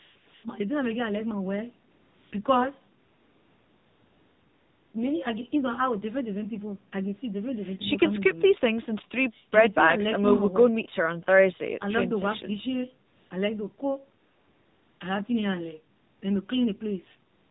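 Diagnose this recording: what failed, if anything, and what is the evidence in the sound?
AMR narrowband mobile codec, throughout the speech. This is a codec-stage fault. Nothing reaches above 4 kHz, so the voice has the dull, boxed-in band of an 8 kHz phone call, and it carries a clearly audible buzzy, synthetic edge. The codec rebuilds the voice from a vocal-tract model excited by only a few pulses per 5 ms subframe, and the coarseness suggests a low AMR-NB mode, around 7.4 kbps.

AMR comfort noise, in seven pauses: 0.0–0.44 s, 1.92–2.32 s, 3.0–4.94 s (the longest, nearly 2 s), 13.08–13.3 s, 14.24–15.0 s, 15.96–16.22 s and 17.3–17.5 s. This also belongs to the codec and call stage. In each gap the real background gives way to a smooth, even hiss that switches in and out with the speech. The sender judged these stretches silent and stopped sending speech frames, and the receiver filled them with noise synthesised from a rough level-and-spectrum description. 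The call's microphone high-pass shaping sits underneath as ordinary processing.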